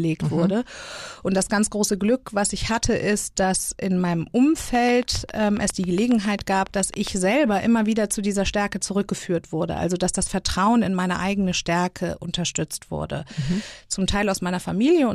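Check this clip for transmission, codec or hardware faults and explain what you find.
One fault is present, a train of clicks in the speech. From 4.75 to 7.08 s, around twenty clicks tick at a steady 7.3 per second. Each is a similar sharp pulse, peaking roughly 10 dB above the speech. The regular pulses likely come from interference or a faulty connection or power supply.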